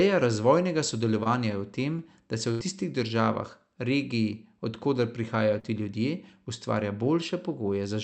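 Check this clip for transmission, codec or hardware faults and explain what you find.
Three packet-loss events are audible, two short concealed packet losses and one burst of packet loss, heard through a call path whose highs stop at about 8 kHz, which fits Opus at a moderate bitrate.

At 1.23 to 1.27 s and again at 5.59 to 5.65 s the speech briefly smears and wobbles. These are short concealed packet losses. About 20 ms and then about 40 ms of audio failed to arrive in time. The decoder covered each hole by extending the preceding sound, following its pitch where voiced and using shaped noise where not, then crossfaded back into the real signal.

From 2.51 to 2.61 s there is a longer break. The last sound is held as a buzzy or hissing tail that fades, and the speech then picks up slightly further along. This is a burst of packet loss, with about 80 ms missing in one run. The receiver kept extrapolating the last sound while lowering its level across the gap. 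The audio in between is gone, not delayed.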